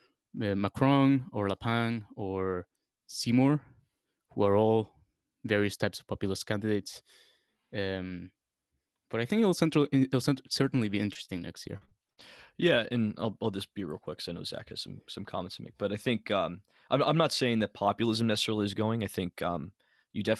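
Speech passed through a WebRTC-style call path whose Opus coding limits the top end to about 12 kHz, consistent with a bitrate near 32 kbps. Right after "think it'll central it'll", from 10.61 to 12.21 s, repeated packet loss gives a choppy, robotic texture: six short holes, the longest 42 ms, about 160 ms missing in total, each patched by stretching the preceding sound for around 150 ms combined, roughly a tenth of that stretch. Unlike a single dropout, the damage recurs in quick succession.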